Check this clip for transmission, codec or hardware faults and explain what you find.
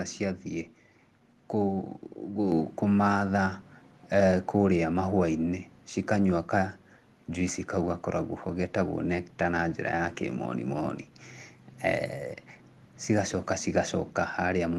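One fault stands out: a microphone volume step-up at 2.52 s. The speech and the background noise jump up together by about 4 dB in an instant and stay at the new level. This happens when call software decides the input is too quiet and raises the microphone's input volume in a single step instead of ramping it gradually. The call path can be heard in the highs, which stop near 12 kHz, a limit that fits an Opus stream.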